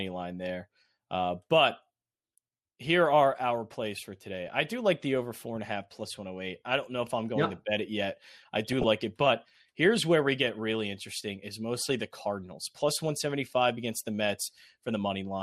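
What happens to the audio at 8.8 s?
At 8.8 s the speech is near the end of a burst of DAB burbling running from 8.65 to 8.84 s. Bit errors at roughly a third of a percent slipped past error correction into a run of frames, corrupting samples so short blips of noise appear in single sub-bands.

Underneath, the sound is dull and granular, likely from MP2 compression at a low rate around 80 kbps. Too few bits force upper sub-bands off and leave the rest coarsely quantised, giving plainly audible gurgling that persists through this moment.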